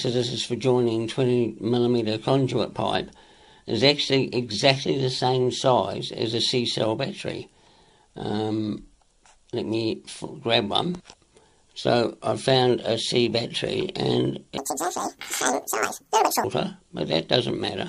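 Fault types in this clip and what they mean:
Wrong sample rate: From 14.58 to 16.44 s the sound jumps up a full octave and runs at double speed, so everything in that stretch is squeaky and rushed. Both changes come from one cause: the samples are played out twice as fast as they were captured, with no rate conversion. That fits audio recorded at about 22 kHz being played at 44.1 kHz. Pitch and tempo are locked together by that 2:1 ratio.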